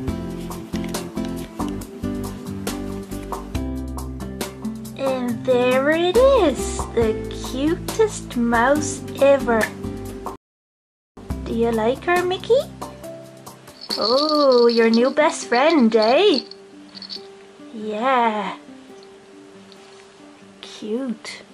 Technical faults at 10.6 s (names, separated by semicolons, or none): rebuffering stall